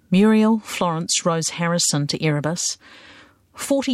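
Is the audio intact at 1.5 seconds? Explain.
Yes, the speech at 1.5 seconds plays through intact, with no dropout, click, distortion or other fault at that moment.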